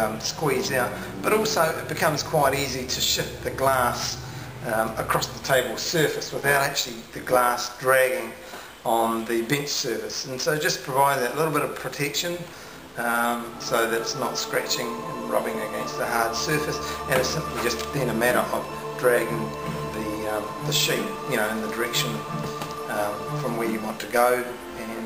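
From 6.24 to 7.76 s there is overlap-add ripple. Windowed frames were put back together with an overlap whose window gains do not sum to a steady total, so the combined level swings once per frame. The swing is about 6 dB deep and repeats at around 200 times a second, fast enough that it reads as a metallic buzz with extra tones around each note, laid over the sound for that stretch of about a second and a half.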